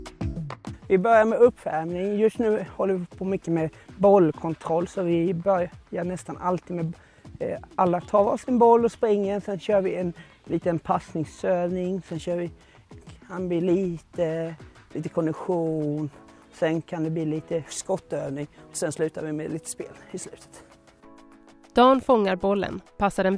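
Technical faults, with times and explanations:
No technical faults are audible.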